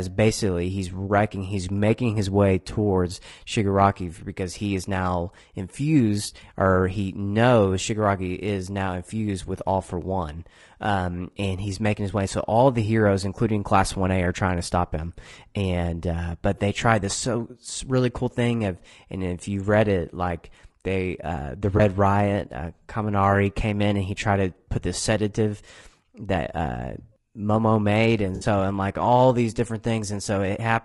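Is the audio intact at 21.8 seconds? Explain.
No. From 21.77 to 21.80 s there is an AAC frame loss with concealment. The decoder lost data and filled the gap from the last good spectrum. The result is a brief smeared, noisy patch, which fits a single lost frame of about 20 ms.

Around that moment the sound is also rough and grainy, with noise between the harmonics and a thin, synthetic top band. This plainly audible damage likely comes from low-delay AAC compression such as AAC-ELD, and fits a bitrate near 32 kbps.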